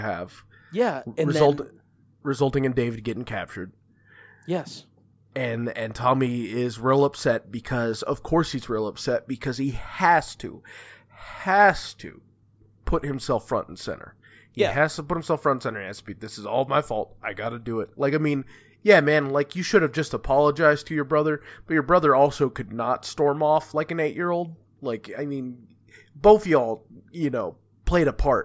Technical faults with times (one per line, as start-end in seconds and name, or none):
none